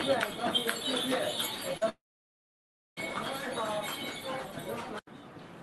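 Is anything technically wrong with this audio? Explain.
Yes, there are two faults, both in the same call, whose call-codec path shows a high-frequency ceiling near 12 kHz.

Between 1.77 and 1.83 s there is short concealed packet loss. About 40 ms of audio arrived too late, and the receiver extended the preceding sound to cover the gap. It comes across as a brief smear. On a spectrogram it shows as a thin, smoothed, repetitive band.

From 1.89 to 2.99 s there is a long gap of about 1.08 s, likely a network dropout. The sound first trails off as a fading buzz or hiss for roughly a tenth of a second, then goes silent for about 0.98 s before resuming. On a waveform this is a flat line. On a spectrogram it is an empty block.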